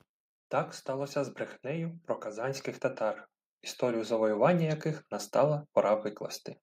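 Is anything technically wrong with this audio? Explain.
Yes. From 0.86 to 2.72 s the automatic gain rises: the control judged the input too quiet and lifted gain about 4 dB, so speech and background swell together.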